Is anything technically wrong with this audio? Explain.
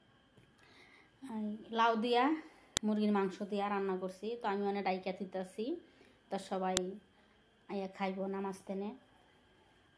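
Yes. There's file header played as audio: sharp clicks at 2.77 and 6.77 s, four seconds apart, where pieces were joined with their header bytes left in, playing as a brief snap.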